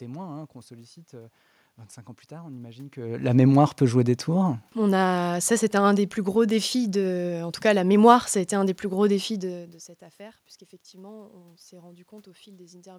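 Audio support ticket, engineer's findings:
No system faults found; room noise and talker movement present.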